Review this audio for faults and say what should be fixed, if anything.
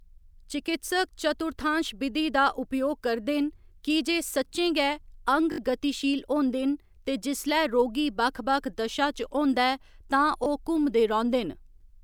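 Twice, new audio failed to reach the playback device in time, so it replayed the last buffer, a repeated buffer fault. At 5.52 to 5.58 s, just before "गतिशील होंदे", a short piece sounds three extra times, a hard-edged stutter that drops around 70 ms of speech. At 10.44 to 10.46 s it repeats once, a brief click-like stutter. The repeat length fits a 20 ms buffer. Prevent it by enlarging the playback buffer or giving the audio thread higher priority so data always arrives before the device needs it.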